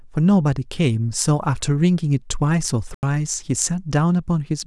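A short speech recording with one fault. At 2.94 s the sound drops into a block of digital silence and returns at 3.03 s, about 85 ms later. The cut is abrupt at both ends, so the gap is heard as a brief hole. The length fits a 2048-sample buffer that was not filled in time. The output was left as zeros for that block.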